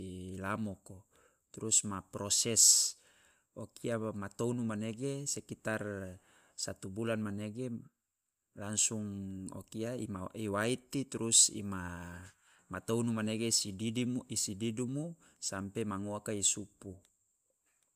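Nothing in the recording stood out as a technical problem on listening.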